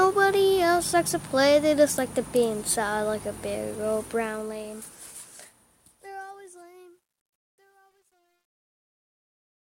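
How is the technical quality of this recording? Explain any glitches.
The recording has one clear glitch, in its closing fade. Truncation distortion on a fade runs from 4.04 to 9.72 s. As the level drops across the fade-out, which starts around 4 s, the gain stage rounds samples without dither, which fits an 11-bit stage. The waveform collapses into coarse steps, so the tail turns gritty, worst from 5.86 to 9.73 s.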